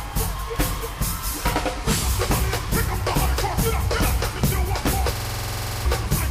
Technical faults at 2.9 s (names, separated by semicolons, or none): none